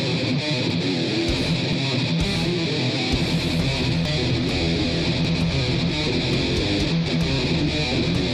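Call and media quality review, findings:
Forward jump in the sound at 0.70, 1.73, 3.12, 4.05, 5.25, 6.04 and 7.08 s; likely dropped buffer (overrun) at capture, with roughly 20 ms skipped each time, about 40 ms at 4.05 s and 70 ms at 7.08 s. The cut has no gap, unlike an underrun's silence.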